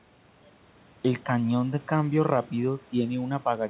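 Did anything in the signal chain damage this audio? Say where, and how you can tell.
No, nothing in the signal chain damaged this speech.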